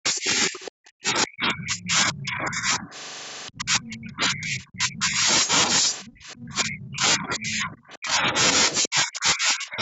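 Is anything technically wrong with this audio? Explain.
Yes, two faults recur through this speech clip.

Speech suppressed in double talk occurs from 0.0 to 2.94 s, 3.5 to 5.27 s, 6.03 to 8.34 s, and 8.87 s to the end. The voice sinks, at worst by about 35 to 40 dB. The likely cause is an echo canceller that couldn't tell the talker from the loudspeaker echo and attenuated both.

The other side's voice leaking through appears as brief scraps, each under a tenth of a second, at 0.65, 1.75, 6.05 and 8.83 s. They sit roughly 15 to 25 dB below the main speech. This is likely residual loudspeaker sound that the echo canceller failed to remove from the microphone.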